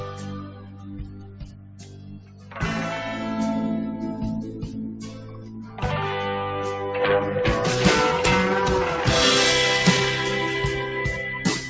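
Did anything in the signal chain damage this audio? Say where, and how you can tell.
Yes. In the call-processing stage, a noise suppressor meant for speech was left running on non-speech sound. Its gain swings by around 15 dB as it treats sustained material as noise, so the level pumps and tails thin while attacks pass largely intact, within an 8 kHz call bandwidth.

Sound was cut by the noise suppressor at 0.00–2.58 s (about 11 dB down at worst), 4.46–4.76 s (about 7 dB), 4.92–5.83 s (about 9 dB) and 11.38–11.69 s (about 6 dB). In each stretch, steady or decaying content sinks as the suppressor classifies it as noise.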